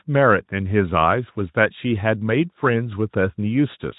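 No technical faults turn up anywhere in the speech, and its Speex coding leaves at most a faint trace on the signal.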